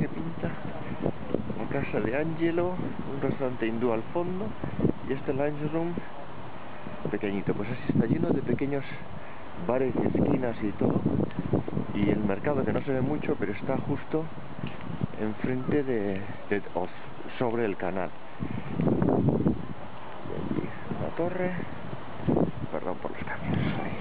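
No technical fault can be heard anywhere in this audio. Nothing in it calls for attention or repair.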